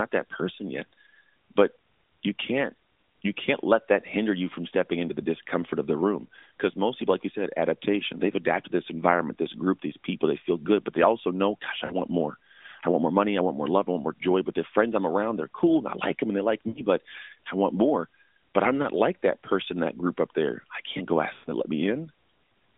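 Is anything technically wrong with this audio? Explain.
Yes, lost AMR speech frames occur three times in this narrowband speech, whose band tops out near 3.7 kHz. At 11.86–11.95 s, 16.68–16.82 s and 21.34–21.50 s, gaps of 40, 80 and 120 ms (about two, four and six 20 ms frames) are concealed. The decoder repeats the last good pitch and vocal-tract settings at falling gain, so the sound smears and fades before recovering.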